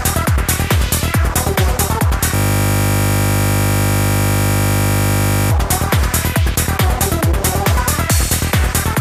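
From 2.35 s to 5.51 s there is a system hang loop. The host or its audio driver stopped supplying new data while the playback hardware kept reading the same ring buffer, so one 20 ms fragment repeats exactly, 158 times in a row. Because the loop is so short, it does not come across as a stutter. It sounds like a steady buzz at the loop rate of 50 Hz, lasting a little over 3 s, before normal audio resumes.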